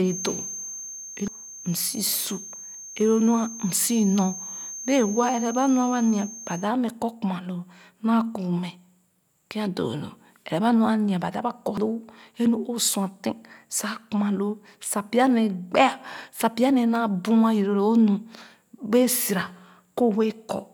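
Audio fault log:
1.28 s and 11.77 s, damaged data in a compressed stream: at each point a short squawk or blip cuts through the speech. Corrupted bytes in the encoded stream cause the decoder to misread frames, lose sync and search for the next valid frame header.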